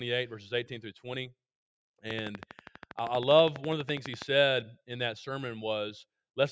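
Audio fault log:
2.11–4.23 s train of clicks: likely interference or a faulty connection injecting around thirty evenly spaced pulses at 12.3 per second, heard as steady ticking roughly 10 dB above the sound.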